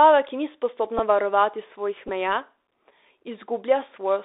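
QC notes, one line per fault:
throughout: Bluetooth CVSD headset codec. The speech is boxed into a 300 Hz to 3.7 kHz line band, with clearly scratchy s sounds, granular hiss beneath, and distortion on loud bright moments where the one-bit, adaptive-step coding can't keep pace. This fits a 64 kbps CVSD link.
0.99 s and 2.08–2.10 s: Bluetooth headset packet repeated. The first is a brief buzzy grain and the second a longer one. Lost voice packets, roughly 7.5 ms and 11.2 ms of audio, were filled by decoding the previous packet's bits again. This fits two and then three packets repeating at 3.75 ms intervals.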